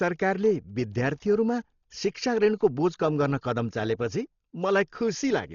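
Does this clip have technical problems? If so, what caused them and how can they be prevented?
Yes. It's dull throughout, with nothing above 7 kHz and a rough, fluttering noise around voiced tones. That points to heavy Dolby Digital compression, likely at about 32 kbps, where the encoder cuts the top band and starves frequency lines, which the decoder fills with dither noise. Encoding at a higher bitrate prevents it.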